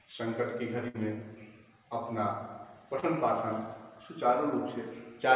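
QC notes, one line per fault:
0.88–0.96 s, burst of packet loss: the receiver stretches and fades the last sound for about 60 ms, then playback resumes with roughly 60 ms of the original audio skipped.
3.00–3.04 s, short concealed packet loss: about 20 ms never arrived in time, so the decoder patched it by continuing the previous sound, leaving a quick smear before blending back.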